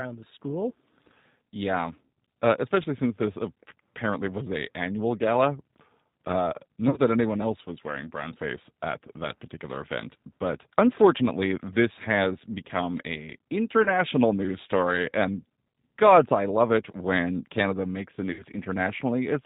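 Throughout the speech, the G.729 codec is plainly audible: the sound has a thin, slightly rough, synthetic quality with nothing above 4 kHz, fitting an 8 kbit/s model that rebuilds speech from a filter, a pitch predictor and a few pulses. This differs from plain low-pass filtering, which dulls the sound without this pulse-driven roughness. VoIP packet loss concealed by the speech codec occurs at 6.88–7.00 s, just before "that anyone else was", where about 50 ms went missing in short scattered gaps. It occurs again at 13.84–13.88 s, between "this has become a" and "news story and gods", and at 18.33–18.43 s after "makes the". Each time the decoder stretches its last sound into a fading buzz or coloured noise that stays weak briefly afterward.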